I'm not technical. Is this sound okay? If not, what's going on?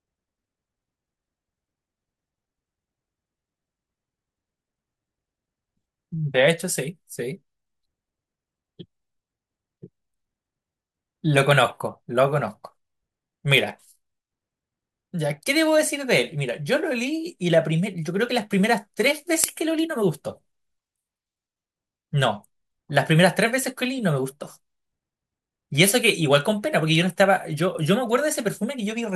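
No. From 12.37 to 19.49 s the speech picks up a gritty, buzzy fizz. This is crude rate conversion: samples were simply repeated, which fits a 32 kHz to 48 kHz change. Unlike steady hiss, the buzz rises and falls with loud, high sounds.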